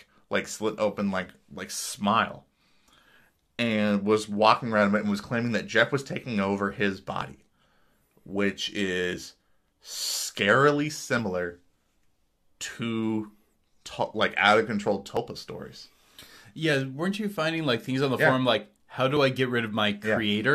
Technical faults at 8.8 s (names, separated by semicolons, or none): none